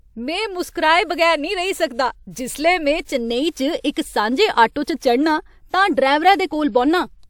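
Speech with one pre-echo fault at 3.92 to 3.96 s: a short hiss smears about 46 ms ahead of a sharp attack, as transform-codec quantisation noise fills the quiet start of the block. A spectrogram shows a broadband noise smudge before the onset's edge.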